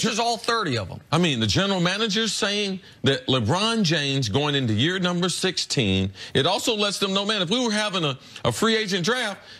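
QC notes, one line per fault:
No faults heard in this clip.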